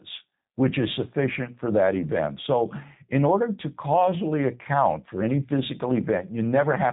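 From start to finish the speech sounds slightly rough and synthetic, with nothing above 3.8 kHz. This is G.729 codec damage: each 10 ms frame is rebuilt from a vocal tract filter, a pitch predictor and a few pulses, which fits an 8 kbit/s G.729A stream.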